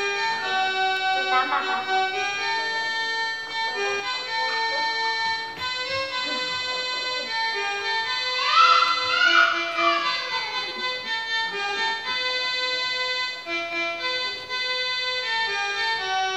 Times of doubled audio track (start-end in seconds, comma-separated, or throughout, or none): 0.00-4.00